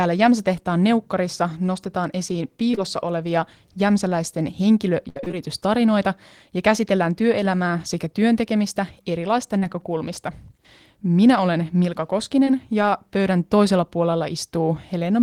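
Short concealed packet loss at 2.71 to 2.75 s and again at 2.75 to 2.79 s, just after "neukkarissa nostetaan esiin" and before "olevia jämsäläisten": two consecutive 20 ms pieces of the speech arrived too late to be decoded. The receiver bridged each hole by extending the preceding sound, pitch-based where voiced and noise-like where not, then crossfaded back, leaving a brief smear across that join.

Repeated packet loss (robotic sound) runs from 5.09 to 5.35 s. Six separate gaps fall within about a quarter of a second, the longest 64 ms, so over half of that stretch is synthesized rather than received. Each patch has barely rejoined the real signal before the next hole opens, giving a choppy texture with fragments dropped.

Short concealed packet loss returns at 9.59 to 9.64 s, right after "työelämää sekä työntekemistä erilaista". This is a 40 ms hole filled the same way and heard as a short wobble. 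A final 20 ms loss at 12.45 to 12.49 s produces a brief smear.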